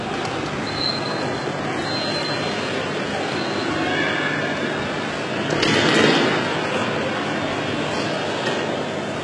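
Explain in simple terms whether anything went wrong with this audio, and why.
Yes, the whole clip likely has heavy HE-AAC compression. The treble is rebuilt from lower sounds, so highs turn gritty and metallic, and nothing reaches above 11 kHz.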